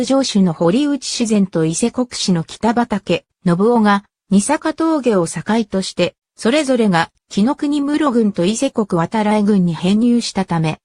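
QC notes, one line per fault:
No faults found on this pass.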